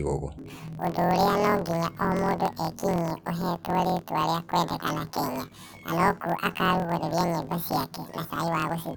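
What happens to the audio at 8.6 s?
Planar audio read as interleaved, from 0.38 s to the end: each 24 ms block plays twice at double speed, lifting the speech an octave with a 41.7 Hz buzz.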